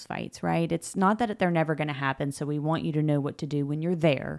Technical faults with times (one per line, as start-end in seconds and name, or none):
none